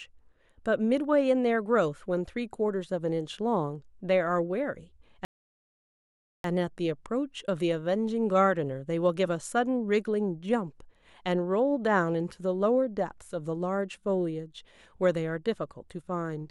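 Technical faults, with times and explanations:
5.25 to 6.44 s, rebuffering stall: the speech halts abruptly and gives way to 1.19 s of silence, then picks up at exactly the point where it broke off, with nothing skipped. Playback ran dry and waited for more data to arrive. On the waveform this shows as a flat line of silence; on the spectrogram, a fully blank vertical band with hard edges on both sides, where the clip gains that much length.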